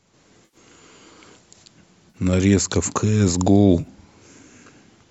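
Speech with three brief smeared, phasey gaps at 0.45–0.57 s, 2.10–2.17 s and 3.80–3.87 s: AAC frame loss with concealment, where the decoder patches roughly 80 ms and then 40 ms of missing frames from the last good spectrum, over a light graininess that is likely from low-delay AAC compression.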